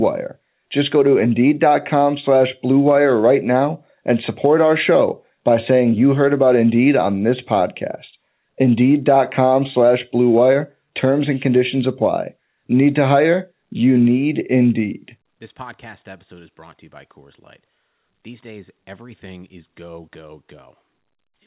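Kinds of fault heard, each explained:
Nothing stood out on listening; the speech comes across as an ordinary call over a narrowband phone-style link.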